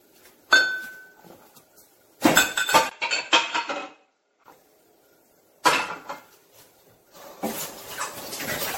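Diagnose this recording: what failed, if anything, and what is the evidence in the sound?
At the codec stage, the whole clip sounds swirly, hollow and smeared, with blurred attacks and nothing above 16.5 kHz. This points to generation loss, likely from many repeated MP3 passes at around 64 kbit/s, each re-quantising on a shifted frame grid.

At the input-device stage, from 2.89 to 4.46 s the sound turns dull, loses everything above 7.6 kHz, and drops about 5 dB after a 20 ms silence. A faint new noise floor also appears. This is likely an input switched to a poorer device.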